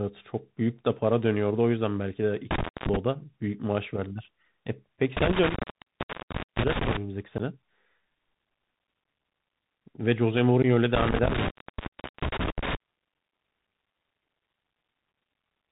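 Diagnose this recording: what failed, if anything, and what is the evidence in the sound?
The whole speech track has passed through the Bluetooth CVSD headset codec, so this is a codec-stage problem. At a 64 kbps one-bit delta stream, nothing gets through above 4 kHz. There's a grainy hiss under everything, s sounds come out scratchy, and loud bright moments distort where the step size can't keep up.

There's also an intermittent contact in the analogue wiring: a cable or plug opening briefly. It happens three times, at 2.51–2.96 s (open about 0.24 s), 5.17–6.97 s (about 1.04 s) and 10.95–12.75 s (about 0.75 s). Each dropout has crackle at its edges and only faint hiss in the gap.

Finally, there's unconcealed Bluetooth headset packet loss on the radio link. At 7.38–7.40 s and 10.62–10.65 s, about 15 ms of audio simply vanishes, roughly a couple of packets each time. Nothing fills the holes, so each one has abrupt edges and the level sags for a moment as the CVSD decoder recovers.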